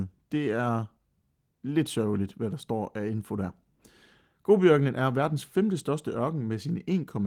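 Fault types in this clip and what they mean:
No faults can be heard in this speech recording.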